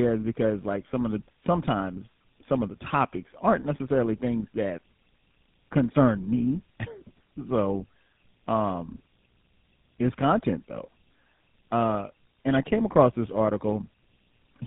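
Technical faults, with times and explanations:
Throughout, tandem speech coding: the speech sounds like it was squeezed through a GSM full-rate coder, turned back into plain telephone-grade audio (likely A-law G.711 at 64 kbit/s), then coded by GSM full rate a second time. The second coder models an already smeared signal, so its errors stack on the first's, leaving the speech rougher, more muffled and more warbly than one pass would. Nothing sounds above 3.9 kHz.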